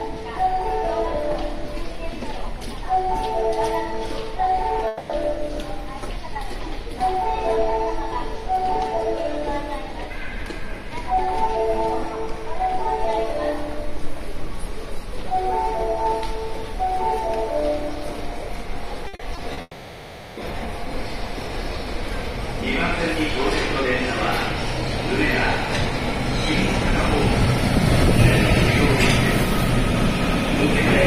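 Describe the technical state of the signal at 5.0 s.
At 5.0 s the signal sits inside a long network dropout running from about 4.87 to 5.11 s. The sound there is a continuation of what came just before, smeared into a buzzy, hiss-like tone that tails off over roughly 220 ms, with no true silence. This is likely the receiver filling a gap where no audio arrived, so that stretch of the original is missing and playback resumes beyond it.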